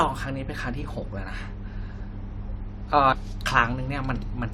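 A speech clip with one audible break, from 3.12 to 3.16 s, where the sound cuts abruptly and picks up again with a small blip and a jump forward rather than resuming where it stopped. That points to a likely stream segment skipped: one chunk of the segmented stream failed to load and playback carried on from the next. A dropout or buffer underrun would leave a hole of silence and then continue the same speech; here it continues from further ahead.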